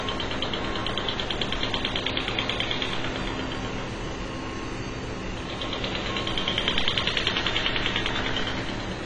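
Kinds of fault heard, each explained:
AAC compression: The whole clip sounds dull and boxed-in, with nothing at all above 10 kHz, and the coding damage is plainly audible from start to finish. That hard ceiling and the loss of fine detail are what you get when a perceptual coder runs short of bits and drops the top band to spend what's left lower down, so this is likely AAC-LC squeezed hard, which fits a rate of roughly 24 kbps.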